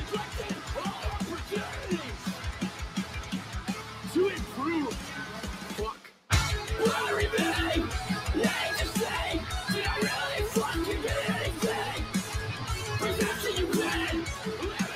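A noise suppressor applied to music or sounds runs through the whole clip. It was built for speech. Here it treats steady tones, ambience and tails as noise. Its gain keeps moving, with a swing of around 10 dB. Attacks pass through at close to full level. Sustained parts sink behind them. The result is a pumping, unsteady level. Held sound thins out instead of ringing on.

Sound cut by the noise suppressor is clearest in six stretches. From 0.05 to 0.7 s the level drops by about 6 dB. Another dip comes from 0.92 to 1.07 s, about 5 dB. The longest runs from 1.33 to 4.11 s, about 6 dB. From 4.97 to 6.3 s it is deepest, about 7 dB. Shorter dips of about 5 dB fall at 12.06 to 12.32 s and from 14.71 s to the end. In each, sustained or decaying sound fades early.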